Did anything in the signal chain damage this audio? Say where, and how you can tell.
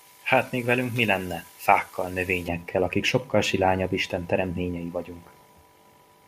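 Yes. From 0 to 2.48 s, before "akik sokkal silányabb", the speech sounds thin and sibilant: pre-emphasis was left on in the transmission stage, boosting treble about 11 dB at 10 kHz without the matching cut.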